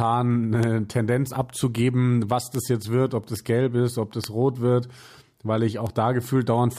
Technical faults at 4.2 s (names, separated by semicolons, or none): bit error spike